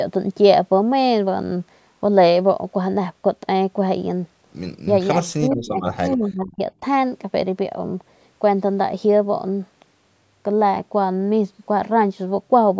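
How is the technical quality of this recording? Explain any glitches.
The recording has two call-related glitches, both between 5.3 and 6.6 s. The bandwidth stops at 8 kHz, which is consistent with standard call microphone processing.

Speech suppressed in double talk, 5.30 to 6.63 s: the voice is turned down for about a second in total, at its deepest roughly 35 dB down. The likely cause is the echo canceller facing simultaneous talk from both ends. Unable to separate the local voice from loudspeaker echo, it attenuated everything its microphone captured, so the talker's level is pulled down instead of staying steady.

Echo leak, 5.51 to 5.55 s: a brief, faint scrap of voice arrives about 410 ms after the original, sitting around 35 dB below the main speech. One side is likely playing the call over a loudspeaker, and its echo canceller probably left a small residue of that playback in the microphone signal, which was sent back as a short, delayed, weak copy.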